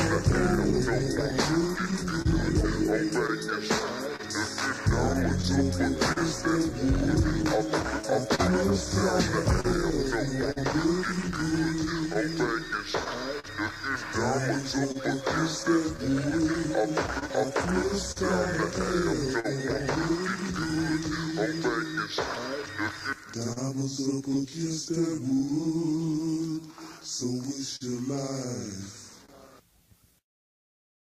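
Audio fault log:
Throughout: clock drift between sender and receiver. The sending side's clock runs slow, by roughly 3 percent against the receiver. Its buffer keeps running low, so small timing hiccups recur at uneven spacing across the whole clip. What sets drift apart from ordinary packet loss is its one-way, steady pressure. The timing errors never balance out. They pile up and force ongoing repair for as long as the clip runs.
0.71 to 24.88 s and 27.76 to 30.95 s: scattered short gaps. About forty brief holes fall in the first span and three more in the second, none longer than about 40 ms. Each is patched by carrying the previous sound forward, about 0.7 s of filler in the first span and about 0.1 s in the second. Together they cover only a small share of the audio. They come across as isolated ticks or smears, random in placement and unconnected to the tempo.
1.58 to 30.87 s: repeated timing corrections. 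To keep pace with the slow sender, the receiver repeatedly stretches short pieces, running the audio at 99 percent speed and adding roughly 0.2 s overall. The edits always lengthen, never shorten, and arrive unevenly spaced. Unlike the gap repairs, they are heard less as clicks and more as a faintly dragging, unsteady pace, the direct result of the drift.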